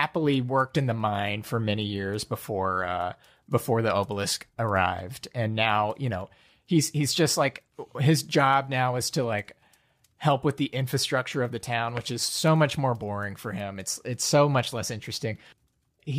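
No technical faults are audible anywhere in the recording; the speech signal stays continuous and intact throughout.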